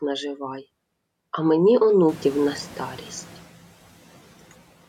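At 2.08 s the room noise in this speech jumps by about 24 dB, and the noise suppressor is caught up short: its estimate lags, so the noise passes with less reduction at first before sinking about 4 dB by 3.41 s, a one-way 1.33 s fade, unlike rhythmic pumping.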